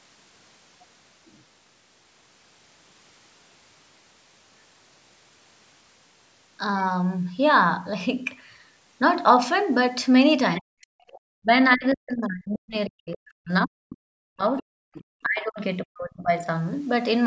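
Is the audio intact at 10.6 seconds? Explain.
No. From 10.56 to 10.61 s you get a short burst of the other side's voice leaking through, sitting about 20 dB under the talker. It's likely the far end playing on the loudspeaker and the echo canceller not fully scrubbing it from the mic.

Right on its heels, from 10.6 to 10.95 s, the talker's own voice drops out hard, roughly 40 dB at its deepest and about 0.4 s of damage in all. That's speech suppressed in double talk, likely the canceller ducking everything because it couldn't separate the talker from the echo.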